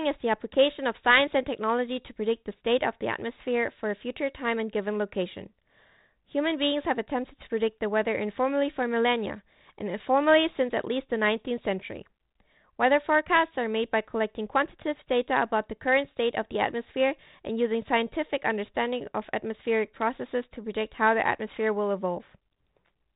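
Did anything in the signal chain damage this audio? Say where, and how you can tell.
No, nothing in the chain damaged this speech. The G.726 ADPCM path at 32 kbit/s is working normally, audible only as the expected telephone band with nothing above 4 kHz and a light coding texture that follows the level of the speech.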